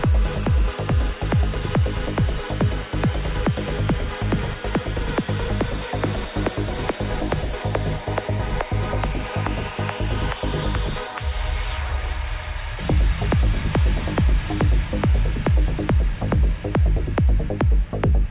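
Listening through the audio, nothing stood out as a technical problem at any point.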